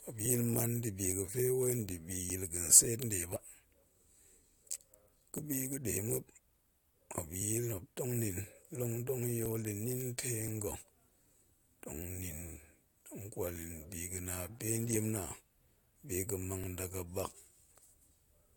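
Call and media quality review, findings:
Periodic USB or driver dropouts. Regular ticks on the speech, every 1.02 s from 0.26 s to 17.66 s, around twenty in all. Each loses a couple of milliseconds, skipped rather than zero-filled. Probable component: USB audio interface or its driver, blocked by a recurring background task. Distinguished from network packet loss by the strict metronome spacing, and from mains or electrical interference by the ticks sounding only where signal is present.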